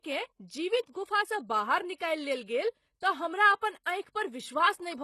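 Gritty, metallic sibilance runs through the whole of this short speech recording: the s sounds come out lispy and synthetic, and the treble has a bright but artificial sheen that stops dead above about 12.3 kHz. The likely cause is HE-AAC compression, which fits a very low bitrate of around 16 kbps. Spectral band replication rebuilds the upper band from copied lower bands, so its harmonics fail to align with the real ones.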